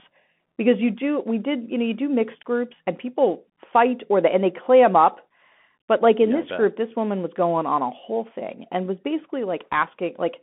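Bluetooth CVSD headset codec damage runs throughout the speech. The sound is confined to a phone-line band of about 200 Hz to 3.4 kHz, and the one-bit delta coding, consistent with a 64 kbps link, cannot track loud high sounds, so s sounds turn scratchy over a granular hiss.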